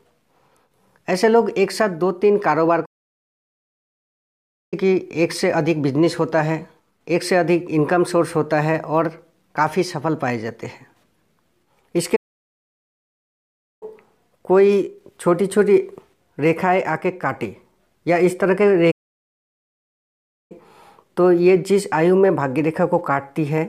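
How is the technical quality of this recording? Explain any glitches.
The recording has three playback stalls, each a clean drop to silence in mid-flow: 2.85 to 4.74 s (about 1.9 s), 12.16 to 13.83 s (about 1.7 s), and 18.91 to 20.52 s (about 1.6 s). The player likely ran short of data or had its thread blocked, so the output stopped until it recovered. Unlike a brief dropout of a few milliseconds, each gap lasts well over a second, and the audio then picks up again.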